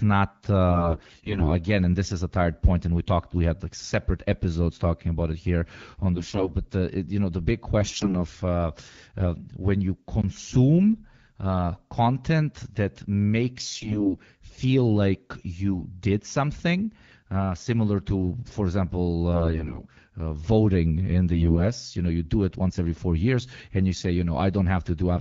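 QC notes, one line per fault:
0.70–1.50 s, 6.16–6.52 s, 7.80–8.15 s, 13.57–14.22 s, 19.32–19.88 s, 21.34–21.65 s: AMR bit errors. The speech keeps roughly its pitch and level but turns hoarse, scratchy and gargly. On a noisy link, flipped bits in the weakly protected parts of each frame scatter the excitation pulses and skew the fine pitch, gain and spectral values. Around one bit in ten arrives wrong, fewer in the last burst. Between bursts the wideband AMR coding sounds clear.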